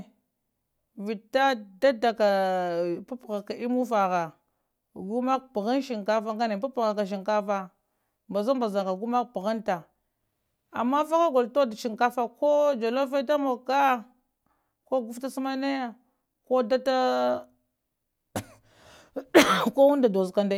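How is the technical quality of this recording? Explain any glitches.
No glitches can be heard anywhere in this recording.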